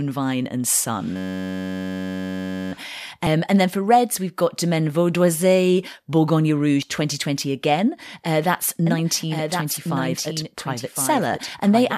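From 1.16 to 2.72 s there is a system hang loop. The playback side froze while the sound hardware kept cycling through one ring buffer, so a single 10.67 ms slice of audio repeats back to back for the whole span. A loop that short reads as a steady, pitched buzz at about 93.8 Hz rather than a stutter, and the loop length fits a 512-sample buffer.

At 3.26 s, just before "and then for reds", compressed frames are skipped. The decoder drops whole frames, so the audio jumps ahead by roughly 50 ms, which fits two 24 ms frames. The same fault returns at 6.82 s with a larger jump of about 70 ms, consistent with three frames.

From 8.87 s to the end, a doubled audio track appears. A second full-band copy of the speech runs about one second behind the original at roughly 5 dB lower. It carries no reverberant tail or room colouring, and it cuts in abruptly rather than fading up. This is likely a second capture through a slower path, or an edit that left two misaligned copies layered together.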